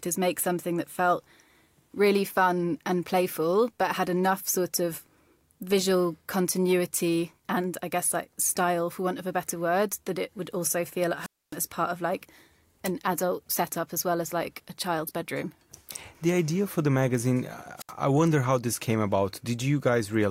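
Speech with two wireless microphone squelch dropouts, at 11.18–11.58 s (about 264 ms muted) and 17.77–17.92 s (about 72 ms). The fading radio signal gives a hiss swell before the receiver mutes, which separates it from a clean digital packet-loss gap.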